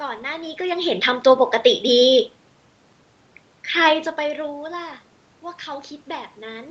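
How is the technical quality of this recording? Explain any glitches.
No technical glitches can be heard in the recording; the speech carries only the upper limit of about 8 kHz expected from a call path, with ordinary room noise and the level changes of a talker moving relative to the microphone near the beginning and again around four seconds in.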